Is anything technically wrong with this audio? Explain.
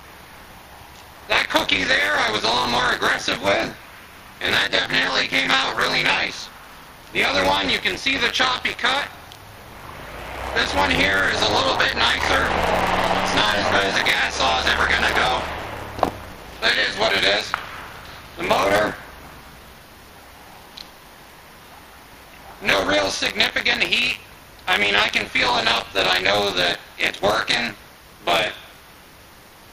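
Yes. Buffer tearing runs through the whole clip. The writer filling the ring buffer and the hardware reading it have drifted so that they cross inside each period, and roughly a third of every buffer replays audio from about 30 ms earlier, with hard joins at both edges. The result is a steady robotic rattle at 100 Hz, which points to a period of about 10 ms. Unlike mains hum, the rattle disappears whenever the audio falls silent.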